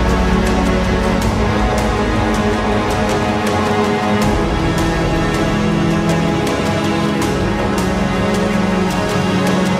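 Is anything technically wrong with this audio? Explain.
No, nothing technically wrong can be heard in this audio.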